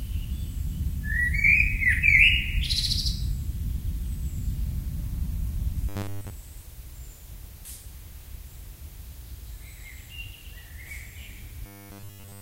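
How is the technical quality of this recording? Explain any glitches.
Two glitches affect the recording, both robotic sound from repeated short buffers. From 5.89 to 6.31 s, and again from 11.66 to 12.41 s, the sound becomes a rigid metallic buzz at 100 Hz. The likely cause is late-arriving audio being replaced by a looped chunk of about 10 ms, covering most of the first stretch and all of the second.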